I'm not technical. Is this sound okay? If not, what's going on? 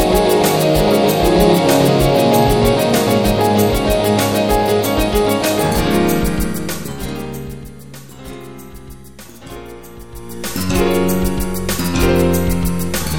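Yes, nothing in this sound points to a technical problem. Where the loudness rises or falls, it does so gradually and smoothly, the way a volume knob being turned would sound.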